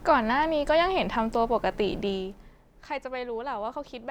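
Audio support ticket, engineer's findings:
No faults found on the speech clip.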